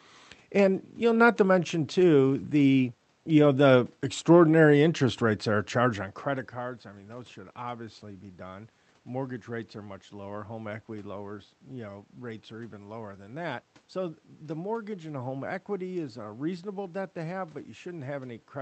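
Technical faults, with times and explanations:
No technical faults detected.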